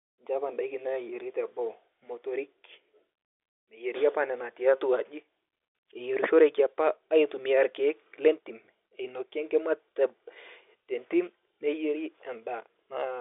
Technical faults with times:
none

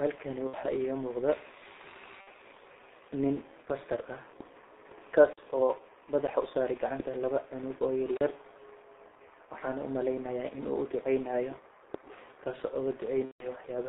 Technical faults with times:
0.00-13.88 G.723.1 codec
0.47-0.55 VoIP packet loss concealed by the speech codec
2.21-2.28 VoIP packet loss concealed by the speech codec
13.25-13.55 VoIP packet loss concealed by the speech codec

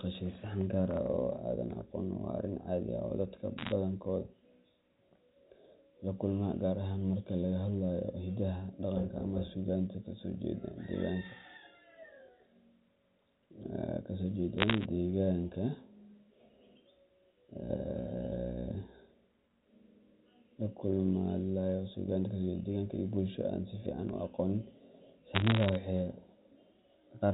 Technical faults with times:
3.58-3.72 bit errors on a digital phone line
14.58-14.85 bit errors on a digital phone line
25.35-25.75 bit errors on a digital phone line

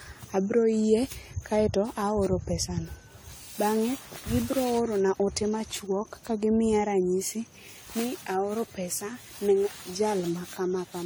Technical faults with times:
0.00-11.06 generation loss

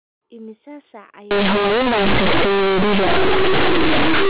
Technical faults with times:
1.31-4.30 companded audio read as linear

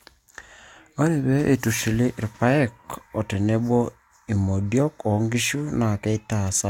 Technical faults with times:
none

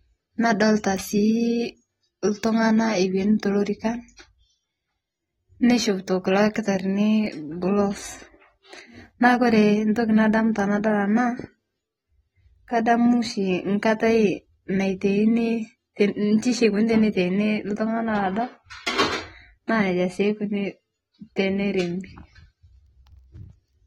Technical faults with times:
0.00-23.87 AAC compression
4.16-4.18 pre-echo
5.60-5.63 pre-echo
9.20-9.22 pre-echo
19.67-19.69 pre-echo

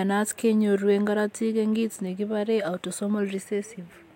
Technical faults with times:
none

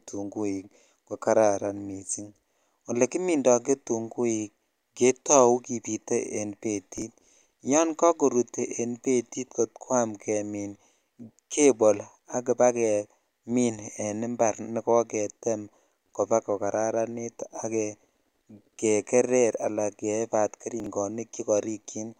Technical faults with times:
6.98-7.02 chunks out of order
20.80-20.86 chunks out of order

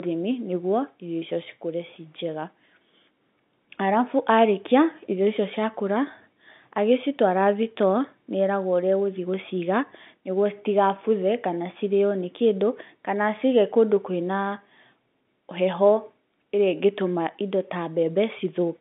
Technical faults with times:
none

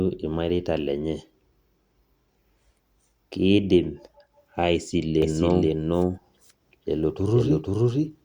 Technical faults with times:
5.22-8.25 doubled audio track

